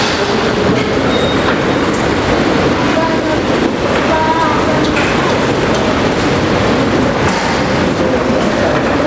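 Gain pumping runs through the whole of this everyday-sound recording. The microphone gain was likely set far too high, so a fast limiter or compressor clamps down each time a loud sound arrives and releases in the pauses. The level swings by around 5 dB, squashing loud and soft moments together. Nothing reaches above 8 kHz, which fits a wideband call codec such as G.722 at 64 kbps.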